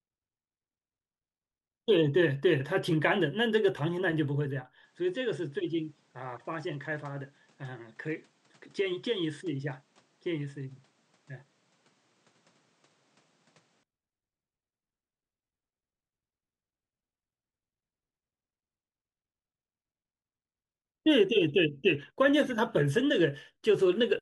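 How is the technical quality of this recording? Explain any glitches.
The recording has one clear fault. From 4.84 to 13.83 s, the speech turns duller and about 5 dB quieter, with nothing above 9.6 kHz and a faint new noise floor. There is no gap at either edge. The input was likely switched to a poorer device, which narrowed the band and changed tone and level.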